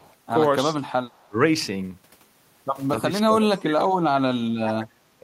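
Speech recording with two echo-canceller problems. From 0.0 to 0.15 s and again from 1.12 to 1.26 s there is an echo leak: a faint copy of the voice about 35 dB down, arriving 286 ms late, likely the far end's loudspeaker pickup getting past its echo canceller. Speech suppressed in double talk appears at 0.65–0.79 s as a dip of roughly 10 dB, at 1.26–1.38 s as a deeper cut of about 25 dB, and from 3.0 s to the end as sustained attenuation reaching about 30 dB. This is likely the canceller mistaking overlapping talk for echo and turning the voice down.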